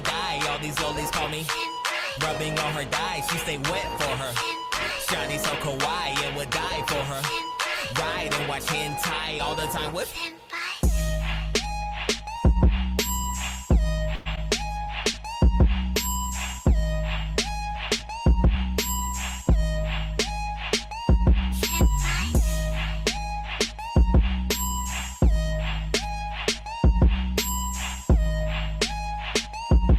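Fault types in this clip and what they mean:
Call audio freeze: From 14.15 to 14.28 s the sound does not stop but carries on as a synthetic continuation of what came just before, about 0.1 s of filler. The likely cause is packets held up in transit until the jitter buffer ran empty. When the audio resumes it picks up where it stopped, so nothing is lost, but the playout is now about 0.1 s later than before.
Short concealed packet loss: At 14.36 to 14.39 s, just after the freeze, a slice of audio never reached the decoder in time. The receiver covered part of the hole with a brief continuation of the preceding sound, around 9 ms, then blended back into the real signal. About 20 ms of the original is simply gone. The result is a momentary smear or wobble rather than a clean dropout.
Jitter buffer speed-up: From 17.36 to 18.55 s the receiver trims excess buffered delay. It cuts out short pitch-period-sized pieces many times in a row, removing around 40 ms in total over roughly 1.2 s. 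Playback runs at about 103% speed with the pitch unchanged, so its timing is compressed.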